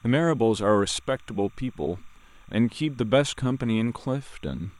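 Speech runs over a faint, steady chirping warble throughout. It is timecode bleed: linear timecode from an adjacent track or cable leaking in, switching between roughly 1 and 2 kHz, well below the speech.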